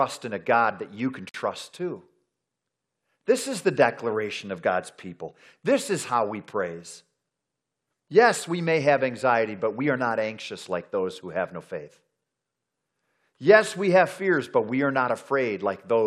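At 1.29 s, just after "that you can", the speech drops out until 1.34 s. This is a gap at a join of encoded pieces, about 50 ms of silence. The audio was encoded in separate sections and joined untrimmed. The encoder's start-up delay and last-frame padding both stayed in. The codec smears the gap's edges, so the truly silent part is shorter. The speech then resumes exactly where it broke off.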